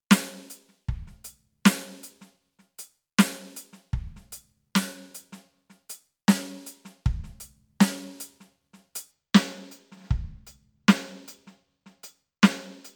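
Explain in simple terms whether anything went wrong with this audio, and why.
From 9.11 s to the end, the music turns dull at the top. This is channel delay (comb filtering). One side arrives a tiny fraction of a millisecond late. Mixed together, the two sides cancel at regular pitches, starting around 10 kHz.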